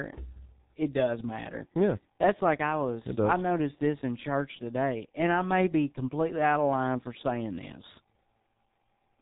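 The clip is speech carrying heavy G.723.1 codec damage from start to finish. Nothing survives above about 3.8 kHz, so the voice sounds muffled and consonants are smeared. The codec models speech in 30 ms frames at a very low rate, here consistent with a 6.3 kbit/s setting, and its voice model trails the rapid changes of real speech, leaving the audio hoarse and the transitions between sounds blurred.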